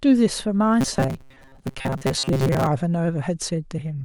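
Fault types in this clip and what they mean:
Robotic sound from repeated short buffers: speech turns to a rigid 134 Hz buzz from 0.81 to 2.67 s, likely a 7.5 ms block repeating; spectrogram shows evenly spaced harmonic stripes.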